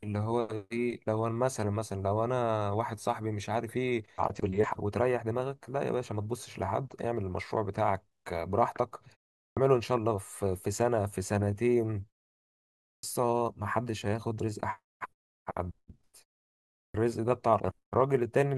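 The output device drops into a sleep state during silences and has to wake before it plays again, so each restart swallows the opening of the speech, a clipped start after a pause. At 9.43 s, after a 0.35 s pause, about 136 ms is lost; at 12.92 s, after 0.88 s, 113 ms; at 16.83 s, after 0.66 s, 114 ms. Each phrase bursts in abruptly, missing its first sounds.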